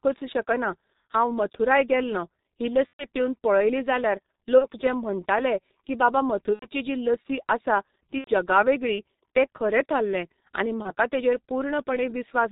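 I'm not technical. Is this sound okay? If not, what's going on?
No, it isn't. Throughout, the speech passes through the G.723.1 codec, an old internet-phone compressor that keeps nothing above 4 kHz and squeezes hard. That makes it muffled and hoarse with smeared consonants, rougher than the merely dull sound of a narrow phone line.

There is also VoIP packet loss concealed by the speech codec at 2.87–3.04, 4.59–4.67, 6.54–6.67, 8.18–8.30 and 10.82–10.91 s. Pieces of the call went missing, and the decoder filled each gap by stretching the last sound into a fading buzz or noise, which goes silent partway through the longer gaps at 2.87, 6.54 and 8.18 s. The voice stays weak briefly afterwards.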